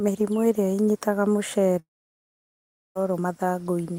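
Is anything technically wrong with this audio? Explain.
Yes. From 1.79 to 2.97 s the sound trails into a fading buzz, then about 1.1 s of silence, likely a long network dropout that lost that stretch.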